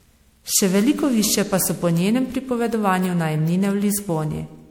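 Generation loss runs through the whole speech clip: the sound is swirly, smeared and hollow, with blurred consonant attacks. This is likely from repeated MP3 encoding, around seven passes at what sounds like roughly 96 kbit/s, each requantising on a shifted frame grid and compounding noise and spectral holes.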